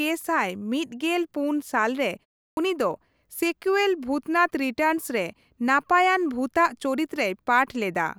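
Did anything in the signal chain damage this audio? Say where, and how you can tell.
Yes: a clipped start after a pause, at the playback stage. After a 0.34 s gap, about 60 ms is lost at 2.51 s, so "ᱩᱱᱤ ᱫᱚ ᱥᱮᱠᱩᱭᱮᱞ" begins abruptly. The output device slept through the silence and woke late. The waveform jumps from flat straight to speech level, and the spectrogram lacks the onset energy.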